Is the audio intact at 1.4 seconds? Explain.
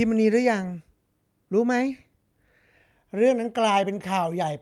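Yes, the speech at 1.4 seconds plays through cleanly, with no dropout, click, distortion or other audible fault at that point.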